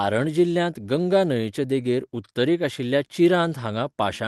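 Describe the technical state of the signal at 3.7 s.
At 3.7 s the speech is intact, with no dropout, glitch or other fault.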